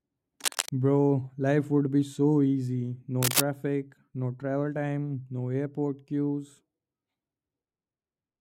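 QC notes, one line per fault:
0.44–0.70 s, cable scratch noise: a worn cable or connector was likely moved, its contact resistance jumping about rapidly, so dense, uneven bursts of crackle ride over the speech for about a quarter second, sitting only a little below the speech level.
3.22–3.40 s, cable scratch noise: the same likely contact disturbance returns for under 0.2 s, this time with scratching and rustling roughly as loud as the speech itself.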